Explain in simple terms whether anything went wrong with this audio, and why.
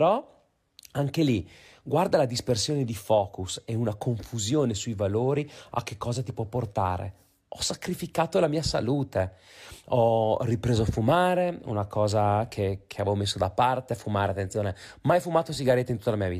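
Nothing went wrong with this speech recording. No technical fault can be heard at any point in it.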